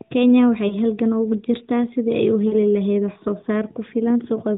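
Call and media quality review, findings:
Brief dip and warble at 0.68–0.75 s, longer smeared, fading stretch at 2.48–2.55 s; lost AMR speech frames, decoder repeating last pitch and vocal tract settings at falling gain, fitting one then two dropped 20 ms frames. Narrowband AMR band limit below 4 kHz, light codec colouring.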